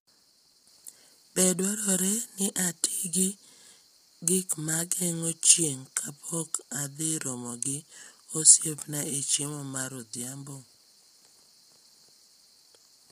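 Throughout, the speech sounds rough and grainy, likely from heavy low-delay AAC compression at a low bitrate; spectrograms show smeared harmonics, noise-filled gaps, and a thin top band.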